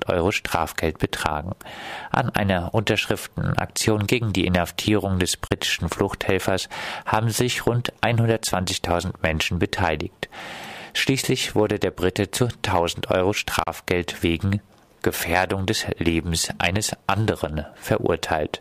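A Bluetooth dropout cuts the audio at 5.47–5.51 s and again at 13.63–13.67 s: each time the sound drops to silence for about 30 ms, then resumes further along, as though it kept playing. This is likely audio packets reaching the headphones too late and being discarded; the gap length fits a couple of lost packets.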